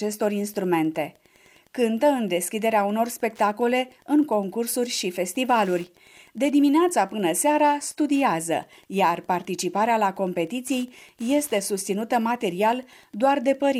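A steady tick runs through the whole recording, repeating every 102.4 ms, or about ten times a second. This is Wi-Fi interference: a nearby radio's beacon transmissions are being rectified by the audio circuitry. The ticks sit roughly 35 dB below the main signal.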